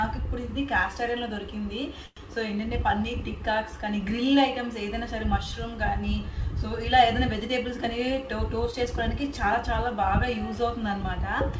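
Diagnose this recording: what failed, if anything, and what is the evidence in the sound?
At 2.06 s the sound stops advancing and the last fragment is extended as a fading buzz for about 106 ms, ending in roughly 30 ms of silence, then resumes at 2.19 s with nothing lost. This is a call audio freeze in the network and jitter-buffer stage, likely caused by delayed packets draining the buffer and the receiver concealing the gap.

From 7.41 s to 9.55 s the audio runs about 5% fast at unchanged pitch and sounds slightly hurried. This is a jitter buffer speed-up: the receiver trims short pitch-period segments, about a tenth of a second in total, to reduce excess buffered delay. The G.722 band limit, with nothing above 8 kHz, comes from the call codec.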